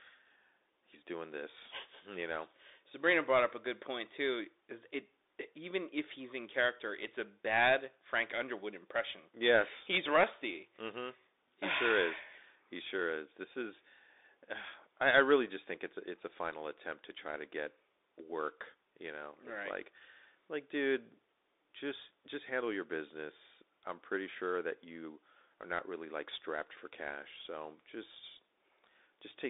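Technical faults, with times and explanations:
Throughout, Bluetooth CVSD headset codec. The speech is squeezed into a narrow band, about 300 Hz to 3.7 kHz. Each sample is just one up-or-down bit with an adapting step. Loud high sounds outrun that step, so s sounds turn scratchy over a granular hiss.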